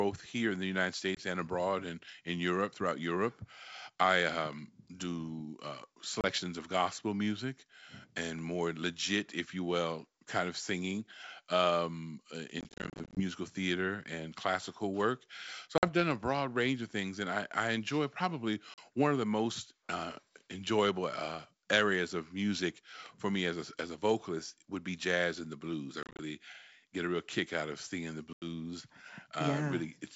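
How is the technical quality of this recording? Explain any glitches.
Packet loss on an ADPCM call breaks up this speech seven times, over a wideband G.722 link whose clean lower band fits the full 64 kbit/s mode.

At 1.15, 6.21, 12.61 to 13.21, 15.78, 18.74, 26.03 to 26.21 and 28.33 s, lost packets become silence and the receiving decoder's predictor and step size fall out of step with the sender's. Each gap therefore has a hard edge, and the speech returns slightly distorted before settling. Most drops last 20 to 90 ms, about 2 to 10 packets each. Between 12.61 and 13.21 s, about 290 ms is lost in short holes of up to 30 ms. From 26.03 to 26.21 s, about 110 ms is lost the same way.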